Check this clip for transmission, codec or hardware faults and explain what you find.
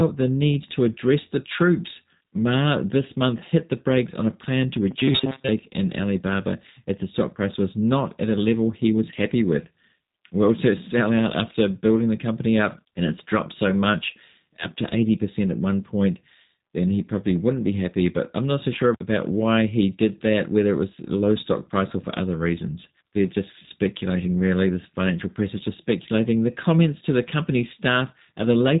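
Two faults stand out in this speech clip.

Throughout, the audio has G.729 codec damage. A filter-and-pulse model rebuilds each frame, which fits 8 kbit/s. The result is plainly rough, synthetic speech with nothing above 3.8 kHz. Unlike a simple low-pass, the roughness comes from the coding, not only the missing top end.

From 4.91 to 5.50 s, just after "on a plan to", there is robotic sound from repeated short buffers. The likely cause is short chunks being looped while fresh audio was late. A rigid, metallic 133 Hz buzz replaces most of the speech, which fits repeats about 7.5 ms long. That fixed pitch is what separates it from the codec's constant roughness.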